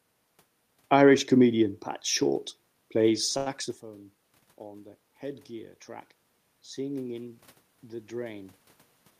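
At 3.37 s there is a short stall from a late packet, lasting until 3.48 s. A packet missed its playout time, the jitter buffer ran dry, and the receiver stretched the last sound for 88 ms until the packet arrived. It then resumed from the same point, so nothing is lost, but playback now runs 88 ms later. It is heard as one sound held unnaturally long with a slight buzz or dip. A spectrogram shows flat, smeared harmonics over that span, and the waveform shows a repeating, near-identical cycle pattern. The level change from the talker shifting position around 3.5 s falls just after it.

From 6.75 s to 8.61 s the automatic gain is rising. The input level had fallen by about 18 dB, and the gain control answered by gradually raising its gain by about 4 dB over nearly two seconds. Speech and room noise swell together, so the background noise grows along with the voice. On a waveform the envelope widens steadily across the span. 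On a spectrogram the whole frequency range, including the noise floor in the gaps, brightens gradually rather than in a step.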